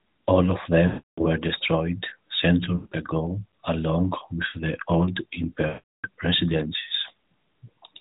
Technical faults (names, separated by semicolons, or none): lost AMR speech frames